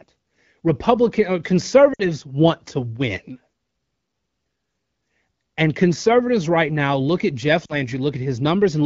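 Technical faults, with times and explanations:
1.93 to 2.03 s, lost AMR speech frames: a 60 ms gap, which fits three dropped 20 ms frames. The decoder repeats the last good pitch and vocal tract settings at falling gain, so the speech smears into a brief warble that sinks toward near silence rather than cutting off. That softness, with no click or hard silence, is what separates it from a plain dropout.
7.65 to 7.78 s, lost AMR speech frames: a shorter 40 ms run, which fits two frames. The same frozen, fading extrapolation gives a quick dip. Because the decoder is wideband, the concealment fades fast, and the recovery sounds briefly weak or rough before settling.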